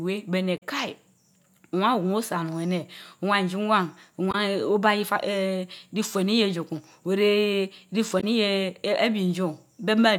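Speech, with three short bursts of damaged data in the compressed stream: 0.57 to 0.63 s, 4.31 to 4.35 s, and 8.20 to 8.24 s. Each is heard as a brief chirp, squawk, click or short hole lasting 40 to 60 ms. The decoder hits corrupted bytes, misreads those frames and loses sync until it locks onto a valid header again.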